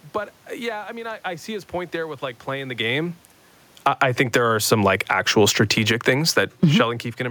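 At 3.71 s, just after "like playing the game", the automatic gain control judges the input too loud and starts pulling its gain down, a fall of about 12 dB that runs until 4.31 s. Because the whole microphone signal is scaled, the speech and the room noise behind it sink together over that half second, so the level drop is heard in the background as much as in the talker, unlike a talker moving away from the microphone.

Before that descent has even finished, from 4.14 s, the automatic gain control reverses and begins raising its gain again, a slow climb of about 4 dB stretching to 6.94 s. This automatic gain rising makes the speech and the room noise swell back up together across nearly three seconds, recovering only part of the earlier cut. The result is an audible dip followed by a gradual, partial return, with the background breathing along with the speech.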